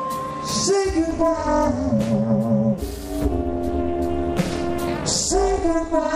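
From 1.11 s to 6.16 s, overlap-add ripple: windowed frames were rejoined with overlaps that don't sum to constant gain, so level dips about 60 dB once per frame, around 300 Hz. Unlike slow tremolo, this metallic buzz locks to the frame rate.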